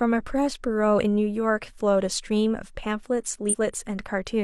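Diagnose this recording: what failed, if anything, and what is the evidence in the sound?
Compressed frames skipped at the codec stage: at 3.49 to 3.56 s the speech jumps forward by about a tenth of a second, roughly two 46.4 ms frames. Unlike a buffer dropout, there is no silent gap; the speech simply jumps ahead where the missing frames were left out.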